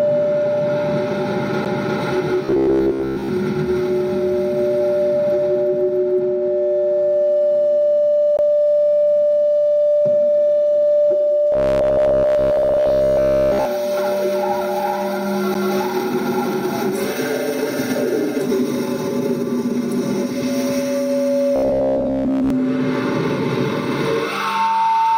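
Three CD skips turn up, at 1.65 s, 8.37 to 8.39 s and 15.54 s: each is a quick tick and a brief mute, from a few milliseconds up to about 20 ms, after which the audio carries on from a different spot, as if the laser had hopped to another turn of the disc's spiral. There's also robotic sound from repeated short buffers, at 2.45 to 3.28 s, 11.52 to 13.65 s and 21.56 to 22.50 s. The sound goes stiff and metallic with a fixed 66.7 Hz buzz, which fits a 15 ms chunk being looped, likely because fresh audio wasn't arriving fast enough. In the first and last stretches most of the audio is repeated material. The middle one is looped throughout.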